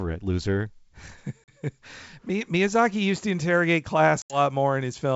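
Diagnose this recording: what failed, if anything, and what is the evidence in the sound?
Packet loss on an ADPCM call, a network fault, at 1.45–1.54 s and 4.22–4.38 s after "used to interrogate": hard-edged silences of 40 and 80 ms, roughly two and four packets. The decoder's predictor and step size then mismatch the sender's, so speech returns slightly distorted before settling.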